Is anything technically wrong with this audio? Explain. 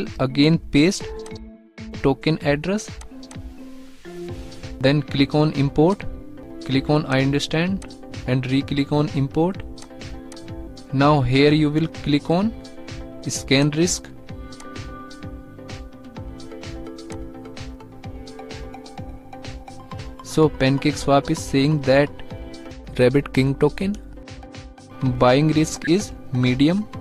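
Yes: two corrupt-frame events decoded, at 11.13 s and from 25.84 to 25.87 s, each hitting roughly two frames. The decoder played damaged data, spraying misplaced energy as a short glitch; spectrograms show brief vertical smears peaking near about -20 and -15 dBFS.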